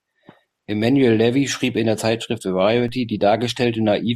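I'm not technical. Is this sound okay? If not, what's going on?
No. At 2.88 s the recording's zero line suddenly jumps and stays shifted until the end, a fault called a DC step, the kind a converter recalibrating would cause. You hear a single low thump at that moment while the speech continues.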